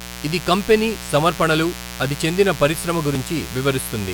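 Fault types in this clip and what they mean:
Mains buzz: a steady, raspy buzz runs under the speech for the whole clip, built on 60 Hz and its harmonics. Sharp switching spikes from a dimmer, rectifier or unshielded run are getting into the signal path twice per mains cycle, so the interference carries energy well above the fundamental, reaching into the kilohertz range. It sits only around 15 dB below the speech, loud enough to be plainly audible between and beneath the spoken sounds.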